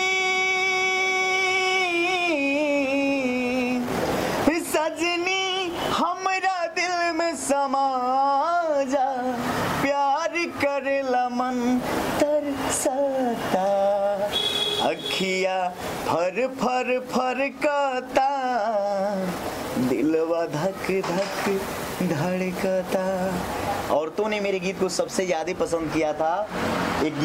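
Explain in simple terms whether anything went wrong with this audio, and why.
Nothing went wrong with this audio: no technical faults can be heard anywhere in the recording.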